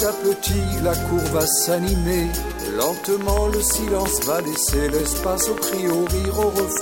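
From 3.04 s to 6.78 s a train of clicks runs over the sound. About twenty sharp pulses arrive at a steady 5.9 per second, standing well above the audio. They tick through pauses too, which points likely to electrical interference or a faulty connection or power supply.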